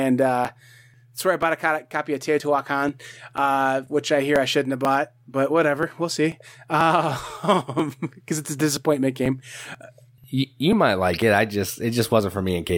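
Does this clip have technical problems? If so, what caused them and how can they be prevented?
Yes: periodic USB or driver dropouts tick through the speech every 0.49 s from 0.45 to 12.69 s, each skipping roughly 10 ms. Move the interface to its own USB port and kill background polling tasks.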